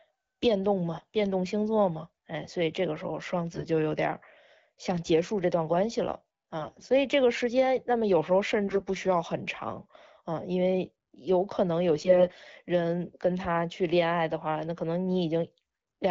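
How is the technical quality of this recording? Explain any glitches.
The speech carries five short bursts of AMR bit errors, at 0.97–1.05 s, 3.52–3.67 s, 6.58–6.84 s, 8.68–8.82 s and 11.94–12.46 s. The last is the longest, about half a second. A weak radio link flipped about 5 to 10 percent of the less protected bits in each frame, while the check on the critical bits still passed, so the decoder used the corrupted data. The excitation pulses landed in the wrong places and the finer pitch, gain and spectral values drifted. In each burst the voice keeps roughly its pitch and loudness but turns hoarse, scratchy and gargly. Outside these bursts the wideband AMR-WB coding sounds clear, which fits a rate around 12.65 kbit/s.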